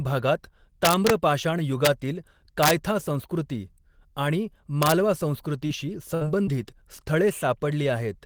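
It's a speech clip with harsh integer overflow cracks at 0.85–1.10 s, 1.85–1.87 s, 2.63–2.71 s (right before "संस्कृती आणि") and 4.83–4.92 s (right after "संस्कृती आणि"). Peaks only about 1 to 3 dB over the limit wrap to the opposite sign instead of clipping. Short concealed packet loss leaves brief smears at 5.67–5.71 s and 6.45–6.49 s, where about 20 ms each went missing, patched over with about 13 ms and 21 ms of fill. A burst of packet loss at 6.15–6.23 s drops about 60 ms, filled with a fading continuation before the audio jumps ahead.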